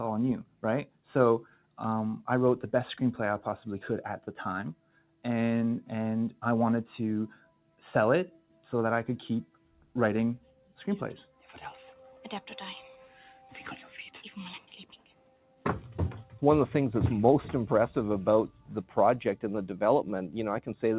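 Throughout, a noise suppressor applied to music or sounds treats held tones and tails as noise, so the level pumps by around 5 dB; the waveform envelope flutters while attacks mostly get through. Sound cut by the noise suppressor appears at 0.44–1.78 s, 4.27–5.24 s, 7.34–8.64 s, 9.45–11.49 s, 13.07–13.52 s, 14.6–15.65 s and 18.52–18.95 s. There, sustained sound sinks by about 12 dB (about 7 dB at 13.07 s) over roughly 0.3 s to a second per stretch, with decays chopped short. These cuts show as dimmed spectrogram bands and abruptly shrinking waveform tails. The call path's hard ceiling at 4 kHz, which fits G.711 mu-law, is also visible as empty spectrum above that line.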